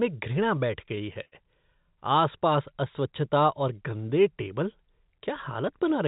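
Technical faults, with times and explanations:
0.86–1.34 s, repeated stalls (stutter): the speech halts five times, longest about 69 ms, as the receiver's buffer runs dry and holds the last sound until packets catch up. About a quarter of this span is filled in this way, yet nothing is lost. The broken, stop-start rhythm sets it apart from a smooth slow-down.
2.72–3.35 s, jitter buffer slow-down: just before "और गंदे टेबल" the speech is drawn out to about 94% speed, adding 41 ms, as the receiver repeats single pitch periods to rebuild its reserve. The pitch stays the same and there are no breaks, unlike a stutter.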